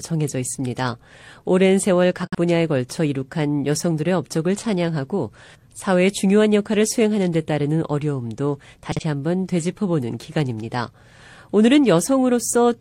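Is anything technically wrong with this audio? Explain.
Yes. Corrupt frame concealed, at 2.23 to 2.37 s and 8.92 to 9.02 s: damaged AAC data was patched by the decoder, muting or reusing earlier spectrum, over roughly two frames each.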